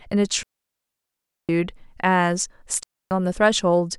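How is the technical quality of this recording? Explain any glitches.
The recording suffers two digital wireless dropouts. From 0.43 to 1.49 s, and again from 2.83 to 3.11 s, the wireless link loses too much data, so the receiver mutes after a very brief fade. Each leaves a clean hole of near silence, about 1.06 s and 0.28 s long, with no noise burst on either side.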